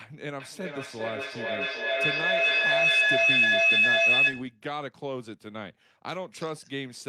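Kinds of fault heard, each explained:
Feedback howl: two devices in the same room are joined to one call, so sound leaving one loudspeaker re-enters a microphone and circulates with net gain on each pass. From 0.39 s the repeats grow rather than decay, narrowing to a tone around 3 kHz that pulses at roughly 400 ms intervals, the loop's round-trip delay. It peaks about 12 dB above the speech level and persists until 4.6 s, when the loop is broken.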